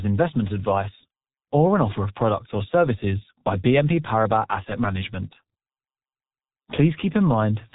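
From start to finish, the speech carries the signature of the G.723.1 codec, heavily damaged. Nothing survives above 3.8 kHz, so the top end is missing and the sound is muffled. The codec's slowly updated vocal model smears consonant onsets and adds a hoarse, buzzy texture to voiced sounds, which fits a low bitrate of about 6.3 kbit/s working in 30 ms frames.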